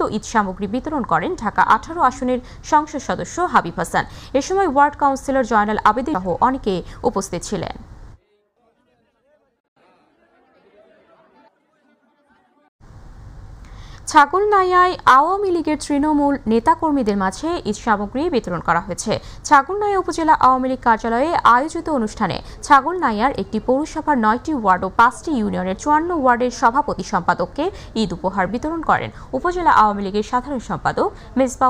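At 6.14 s there is a CD skip. The audio drops out for only a few milliseconds, which leaves a small tick. It then resumes at a different point. A knock or a disc flaw made the laser jump to another turn of the spiral track.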